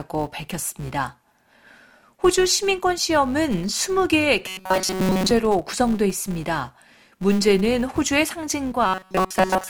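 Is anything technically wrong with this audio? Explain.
Yes, there are two faults. Throughout the speech, a steady 200 Hz buzz of fine ticks rises and falls with the level. This is a filter restarted on every block: each block of about 5 ms starts from silence, so a small transient marks every boundary.

From 4.48 to 5.31 s and from 8.86 s to the end at 9.7 s, the speech turns into a rigid, metallic drone pitched at 188 Hz. The first stretch is entirely affected, and the second mostly. This is robotic sound from repeated short buffers, likely caused by audio arriving too late and a segment of about 5.3 ms being looped in its place.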